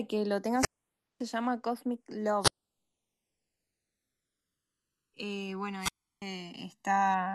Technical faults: channels drifting apart; wireless microphone squelch dropout

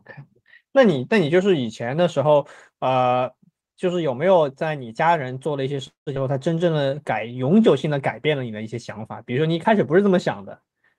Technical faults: call audio freeze; skip ahead; jitter buffer slow-down

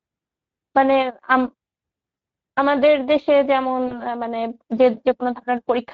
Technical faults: Speex codec; VoIP packet loss concealed by the speech codec

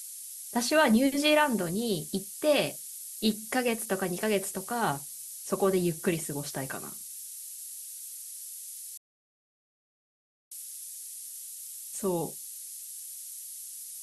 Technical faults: low bit depth with noise shaping; rebuffering stall

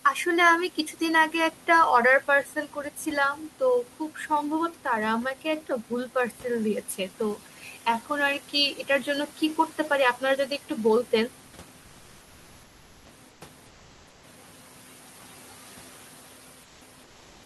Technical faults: noise suppressor artifacts; speech cut by the noise suppressor; comfort noise in place of the background

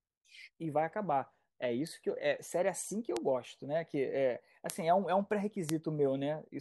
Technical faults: bit error spike

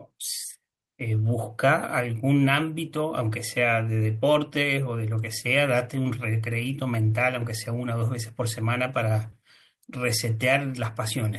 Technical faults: none

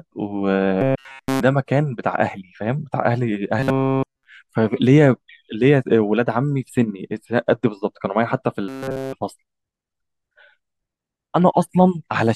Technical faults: robotic sound from repeated short buffers

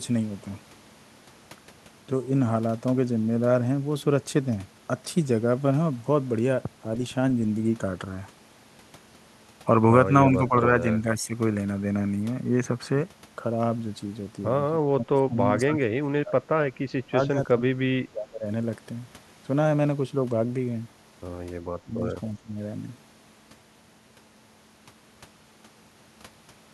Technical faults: speech suppressed in double talk; echo leak

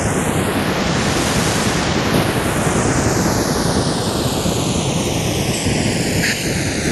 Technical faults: channels drifting apart

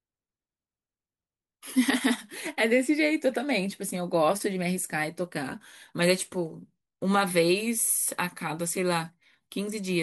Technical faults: none

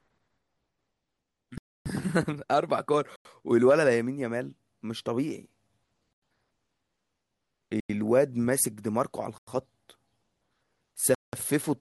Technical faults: block of digital silence

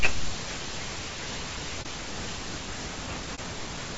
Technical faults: low-delay AAC compression; AAC frame loss with muting

